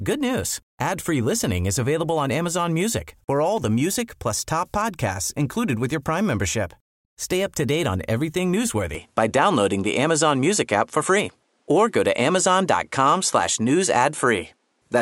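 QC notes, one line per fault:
8.95 to 15.02 s, likely an input switched to a poorer device. Right after "to date on everything" the speech changes character with no gap. Nothing is heard above 11.4 kHz, so the top end sounds duller. The level shifts by roughly 5 dB. A faint new background noise appears, far below the speech. These changes arrive together and persist to the end, which points to a different microphone taking over the recording.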